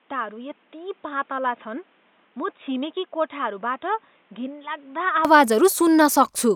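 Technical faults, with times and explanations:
0.00–5.25 s, input switched to a poorer device: The speech sounds dull and boxy, with nothing above 3.8 kHz. It is roughly 10 dB quieter and carries its own background noise, sitting roughly 35 dB below the speech. At 5.25 s the sound opens up and clears, with no gap at the change. The likely cause is the system recording from a narrower-band microphone or headset call profile, then switching back to the fuller input.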